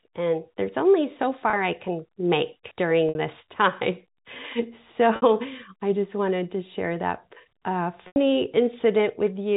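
Packet loss with pitch repetition shows up at 1.5, 3.09, 5.16 and 8.07 s, gaps of 30, 60, 60 and 90 ms bridged by a repeated pitch period, heard as a brief held buzz at the first and, at the longer three, a held note fading into silence before speech returns with a short cross-fade, within the narrowband G.711 audio.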